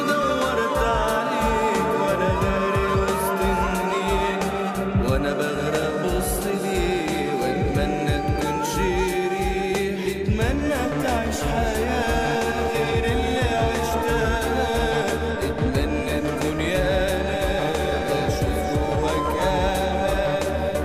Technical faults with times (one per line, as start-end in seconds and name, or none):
none